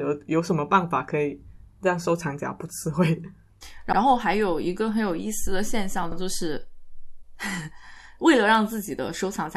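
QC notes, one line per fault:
3.92–3.97 s, repeated frames: a 52 ms block of speech plays twice, heard as a brief stutter, lengthening the audio by 52 ms.
6.12–6.17 s, repeated frames: another 52 ms span, which fits two compressed frames, is replayed once, producing the same stutter and adding 52 ms.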